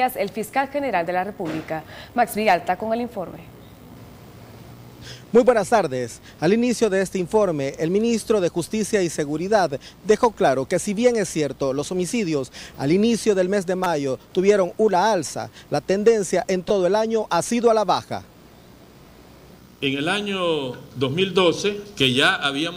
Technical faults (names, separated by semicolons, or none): repeated buffer